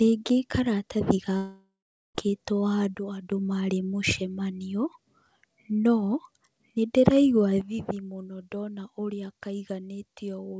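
At 1.37 s the speech breaks off in a long network dropout lasting to about 2.18 s. Roughly 0.78 s of audio never arrives. The receiver stretches the last sound into a fading buzz, and for the final 0.44 s or so only silence remains. Speech then resumes further along with the missing stretch skipped. The gap is most likely a burst of lost packets. Its length, and the fall to silence instead of a brief smeared glitch, set it apart from ordinary short packet-loss concealment.

At 2.95 s, just before "marĩ mũcemanio", a sudden gain jump drops the level by about 9 dB until 3.32 s, where it steps back up. At 7.61 s a second drop of about 10 dB holds to the end of the clip. Each change is instant, and the background noise falls by the same amount as the speech. That is what separates these steps from an automatic gain control easing down or from the talker speaking more softly. The likely cause is a digital gain setting applied with no ramp. 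Across all of this the G.722 call path leaves nothing above 8 kHz.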